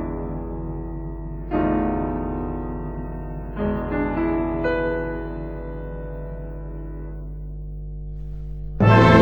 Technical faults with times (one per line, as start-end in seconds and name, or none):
0.00-9.21 mains hum